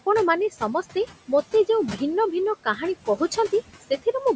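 Noise suppressor artifacts run through the whole clip. The suppressor pulls the room noise down by about 15 dB in each frame. The noise dips in the pauses and swells back under the speech.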